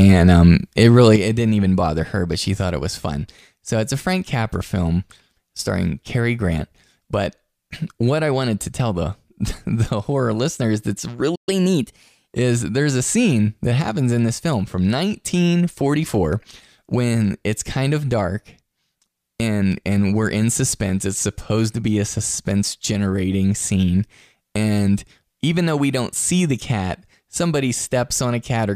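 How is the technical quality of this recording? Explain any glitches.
The recording has three clear glitches, two of them tied together in the middle.

First, a sudden gain jump at 1.16 s, right after "um it". The level drops by about 7 dB from one sample to the next and stays down for the rest of the clip. The speech and the background noise fall together, so it isn't the talker moving away. It's most likely a digital gain setting or bit shift applied with no ramp.

Second, a playback stall from 11.35 to 11.49 s. The audio just cuts out mid-flow for roughly 0.12 s and then carries on from where it stopped. That gap is likely the player running dry of buffered data, or its thread getting blocked briefly, so the output has nothing to play until it recovers.

Third, catch-up at higher speed from 11.49 to 12.29 s, straight after the stall. The player runs its backlog at 1.15 times normal speed by resampling, which shifts the pitch up by about two semitones too. 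The voice sounds briefly hurried and a touch chipmunky for just under a second, then drops back to normal.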